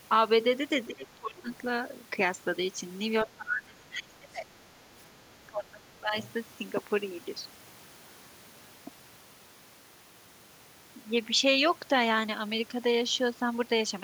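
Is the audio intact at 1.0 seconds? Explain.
No. Speech suppressed in double talk runs from 0.87 to 1.5 s, covering the 1.0 s mark. The level sinks by around 20 dB at its deepest, and about half a second within that span is affected, so the speech thins and breaks into pieces. The likely cause is an echo canceller facing simultaneous talk from both ends: unable to tell the near talker from loudspeaker echo, it attenuated everything, including the wanted speech.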